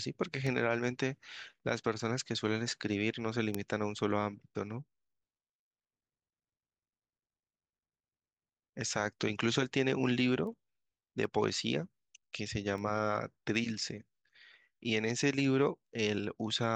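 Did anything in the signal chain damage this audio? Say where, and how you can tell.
Yes. The damage is at the digital interface, where the receiving converter runs unlocked from the sender's clock, causing word clock ticks. Sharp, uneven ticks recur through the speech from 0.47 s to 16.64 s, about twenty in all, roughly every 0.7 s. Each time the two clocks slip past each other, one sample is dropped or repeated. That rate points to a mismatch of a few tens of parts per million. Unlike buffer dropouts, there are no gaps, only metronomic clicks.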